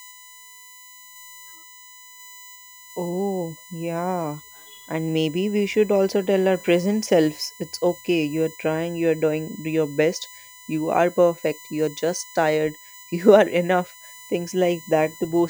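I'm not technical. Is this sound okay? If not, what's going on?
No. A USB connection is leaking electrical noise into the audio: it draws power in regular bursts a thousand times a second. That causes USB whine, a steady high-pitched tone built on 1 kHz, sharpest near 7 kHz, audible under the speech throughout.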